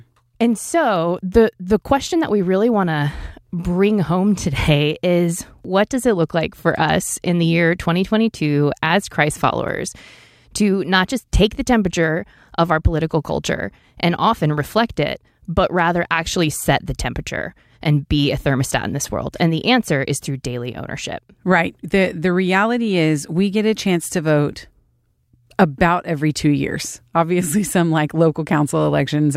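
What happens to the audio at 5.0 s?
Nothing goes wrong at 5.0 s: the speech continues without interruption, dropout, distortion or glitch.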